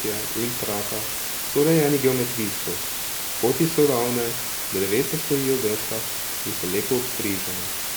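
Speech runs throughout under a low bit depth with dither fault: a constant, even hiss almost as loud as the voice, fitting 4-bit samples randomised before rounding. A spectrogram shows a flat broadband floor, and the waveform a thick noise band.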